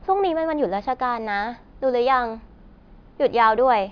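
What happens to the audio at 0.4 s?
Nothing goes wrong at 0.4 s; the speech passes through that moment intact, with no dropout, click or distortion.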